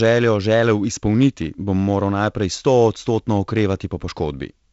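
Nothing here counts as a technical fault; it's just a bit of speech carried over G.722 wideband telephone coding, so the top end stops at about 7.7 kHz and the upper band has that faint hiss you'd expect.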